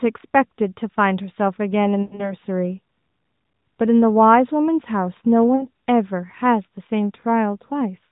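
From 2.02 to 2.33 s the speech smears and sags. These are lost AMR speech frames, about 120 ms in all with a longest run of 100 ms, so the decoder kept repeating its last good pitch and vocal tract settings while lowering the gain. At 5.56 to 5.63 s a 40 ms loss gives only a brief warble. Unlike a hard dropout, neither point has a click or sudden gap. The sound stretches and fades, then returns slightly rough.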